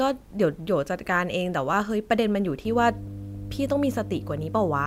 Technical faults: mains hum

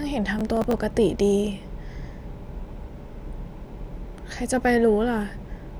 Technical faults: processor overload crackle

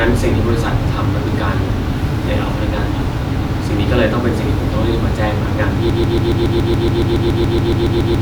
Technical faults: broken-record loop

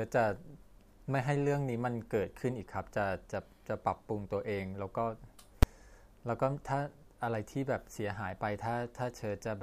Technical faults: invalid numbers at full scale

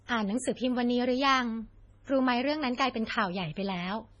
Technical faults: MP3 compression

